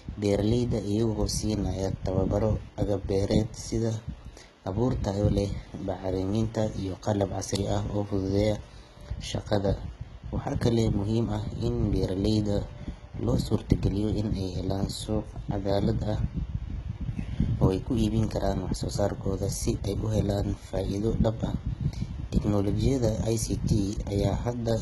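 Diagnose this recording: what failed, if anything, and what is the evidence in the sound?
Throughout the speech, the upper frequencies sound synthetic: s sounds come out gritty and lispy, with a metallic sheen, and nothing reaches above about 11.8 kHz. This points to a codec fault, likely heavy HE-AAC compression at a very low bitrate, around 16 kbps. Only the lower band is actually coded. The treble is rebuilt by copying lower bands upward under a coarse envelope, so its harmonics fail to line up with the real ones.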